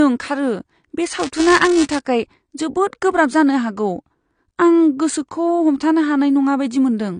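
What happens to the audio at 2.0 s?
At 2.0 s, buffer tearing is just ending. From 1.19 to 1.99 s, writer and reader cross inside each period, splicing in a sliver of audio about 5 ms old. The result is a robotic 375 Hz buzz, which fits a 128-sample buffer. On a waveform it shows as regular small jumps; on a spectrogram, as evenly spaced vertical striations.

The sound also stops sharply at 9.7 kHz, a flat ceiling on the spectrogram, likely from low-bitrate audio saved at a high bitrate: an earlier 32 kbit/s AAC encode under a high-bitrate MP3.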